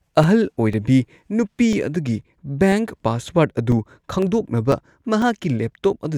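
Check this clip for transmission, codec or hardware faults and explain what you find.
One hardware fault is present: periodic USB or driver dropouts. From 0.23 to 5.73 s, a brief gap recurs every 0.5 s, about ten times. A blocked USB bus or audio driver loses roughly 2 ms each time, filled with silence. The speech carries regular, evenly spaced ticks.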